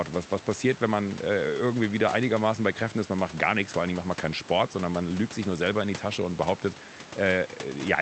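The speech signal shows no technical faults, with only the room's own background noise sitting about 19 dB below the speech.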